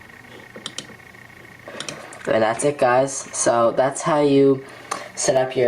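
Throughout, the level swells in the gaps and ducks under each loud sound, swinging around 10 dB: gain pumping, likely from excessive input gain driving a fast limiter or compressor.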